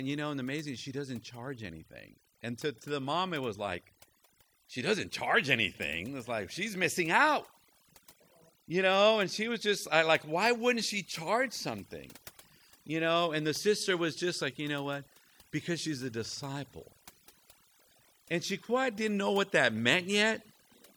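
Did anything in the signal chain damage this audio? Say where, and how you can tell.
Yes: throughout, the speech sits over a near-silent, twinkling background, the mark of overdone noise removal in call processing, gating quiet bands near its noise estimate.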